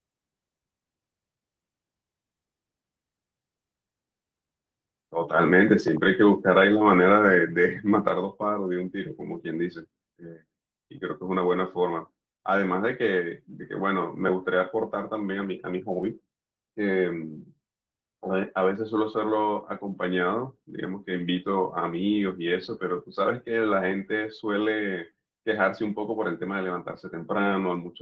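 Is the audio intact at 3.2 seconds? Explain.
Yes, the audio is intact at 3.2 seconds: there is no dropout, glitch or other fault there, only the ordinary coding character of a call path whose band stops at about 8 kHz.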